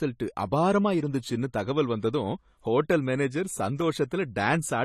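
From start to finish the speech sounds dull and smeared, with a swirling, fizzy edge on sibilants and sustained sounds, and nothing is present above about 14.1 kHz. This is plainly audible codec damage, likely from AAC compression with AAC-LC at a low rate, consistent with roughly 32 kbps. At that budget the encoder quantises each frame's frequency lines coarsely and lowers the cut-off, so fine detail blurs and everything above the cut-off disappears.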